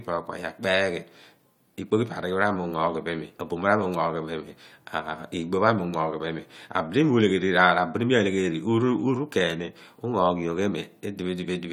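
No technical faults can be heard anywhere in this speech recording.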